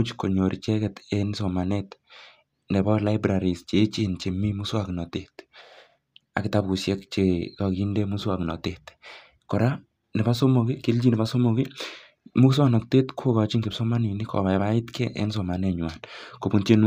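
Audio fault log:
No faults heard anywhere in this speech recording.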